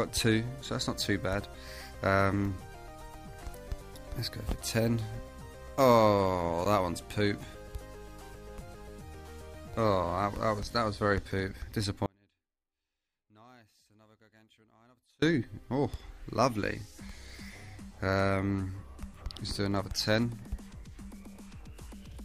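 An audio dropout to a faint residue runs from 12.06 s to 15.22 s, about 3.2 s in all. The sound cuts off abruptly and returns just as suddenly, and the gap is not silent: a faint leak of the signal continues roughly 35 dB below its normal level. The wanted signal was likely lost somewhere upstream while the path after the break stayed live, which is why only that faint trace reaches the output.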